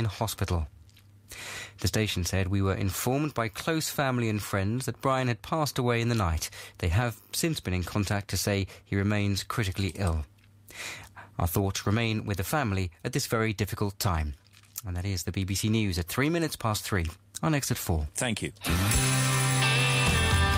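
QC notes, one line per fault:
Nothing stood out on listening.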